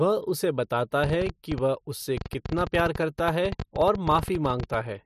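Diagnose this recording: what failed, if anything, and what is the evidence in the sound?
A train of clicks runs from 1.04 to 4.75 s: around fifty similar pulses at about 11.9 per second, unevenly spaced, peaking about 10 dB above the speech and audible in pauses. This is likely interference entering the analogue wiring or a faulty connection or power supply.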